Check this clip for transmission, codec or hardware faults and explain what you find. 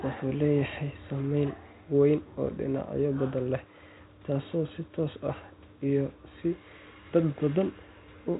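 Nothing stood out on listening to this speech clip that would point to a transmission, codec or hardware problem.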